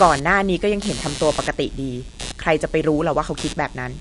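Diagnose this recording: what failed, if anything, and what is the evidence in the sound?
Computer activity noise enters the analogue wiring. A buzz pulsing about 100 times a second runs throughout, roughly 15 dB below the speech. Load changes of the processor, graphics card or mouse shift the shared ground.

Nothing remains above 11.2 kHz. The speech sounds watery, with smeared attacks. The likely cause is MP3 compression at the codec stage, starved of bits at around 48 kbps.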